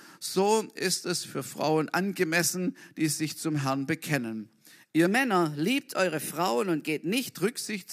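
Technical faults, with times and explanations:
5.06 to 7.29 s, wrong sample rate: the speech suddenly runs about 1.09 times faster and roughly 1.5 semitones higher. Speed and pitch rise together because samples play back too quickly without conversion, which fits 44.1 kHz material played at 48 kHz.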